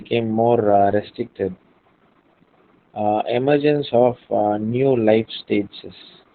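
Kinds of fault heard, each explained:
Opus voice compression: muffled, hoarse, slightly robotic speech with nothing above 4.5 kHz, as a narrowband SILK coder at about 8 kbps codes the excitation coarsely.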